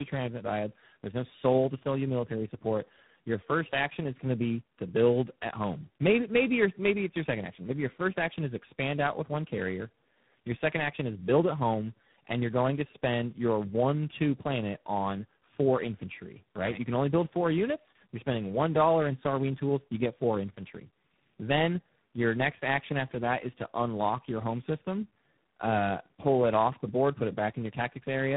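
All the way through, the speech shows tandem speech coding: it sounds like three speech codecs in a row, each recoding the last one's damage. It's rough, noisy, muffled and warbly, with nothing above 3.8 kHz.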